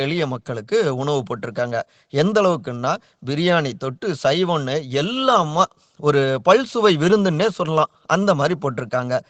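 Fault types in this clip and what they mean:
No faults can be heard in this speech.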